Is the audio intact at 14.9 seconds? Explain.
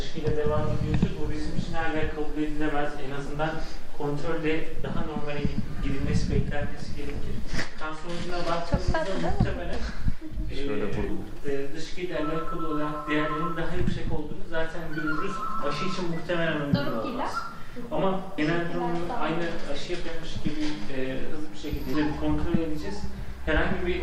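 Yes, the audio at 14.9 s plays through cleanly, with no dropout, click, distortion or other fault at that moment.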